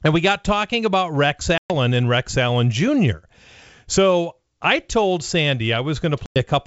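At 1.58 s and again at 6.26 s there is packet loss on an ADPCM call, dropping about 120 ms and then 100 ms of speech into hard-edged silence. On a G.722 wideband link, the decoder's adaptive predictor and step size lose sync with the sender during each gap. When audio resumes, near 1.72 s and 6.38 s, it comes back with brief, slight distortion that settles within some tens of milliseconds.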